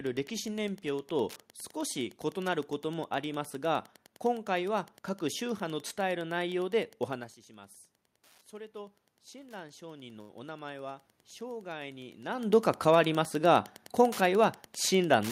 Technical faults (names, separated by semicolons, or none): Wi-Fi interference; automatic gain rising; short stall from a late packet; jitter buffer speed-up